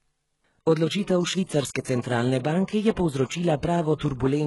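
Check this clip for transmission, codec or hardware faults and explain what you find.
One codec fault runs through the whole recording.

HE-AAC compression, throughout: the speech is heavily damaged, and nothing is present above 11.5 kHz. The likely cause is HE-AAC coding at a very low rate, which fits roughly 12 kbps. Only the lower spectrum is truly coded. The treble is synthesised by copying lower bands upward under a coarse envelope, so its harmonics fail to align. The s sounds come out gritty, metallic and lispy.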